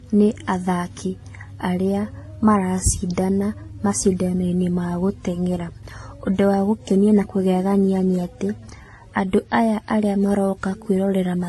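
Throughout the speech the band stops sharply at about 11.8 kHz, and three codecs' worth of coding damage sit on top of each other, their different artefacts heard together. This points to transcoding between lossy codecs, likely a low-bitrate AAC-type encode passed through Vorbis and then WMA. Each stage spent bits re-encoding the previous stage's artefacts and added its own, while the lowest bandwidth limit in the chain survived.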